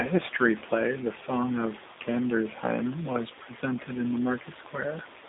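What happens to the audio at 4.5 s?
At 4.5 s the G.729 codec damage runs on as it does throughout: an 8 kbit/s-sounding rebuild, rough and synthetic, with nothing above 3.8 kHz.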